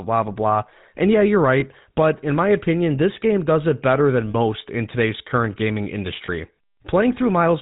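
The speech passes through the GSM full-rate codec throughout. It has a buzzy, gravelly roughness and nothing above 4 kHz, which fits 13 kbps coding. Lost GSM frames occur at 1.60–1.64, 4.30–4.35 and 6.26–6.29 s. The decoder repeats the last good frame, leaving a brief rough, metallic ring.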